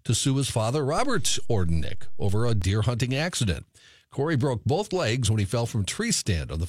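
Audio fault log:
0.98–2.62 s, DC step: Just after "to sue his father" the waveform's zero line jumps by about -24 dBFS, as when a converter recalibrates or an input carrying an offset is switched in. The offset holds until 2.62 s, just before "hunting accident". Each edge of the shift is heard as a low thump or click. Unlike a dropout or a transient click in the signal itself, the speech carries on unchanged straight through both thumps.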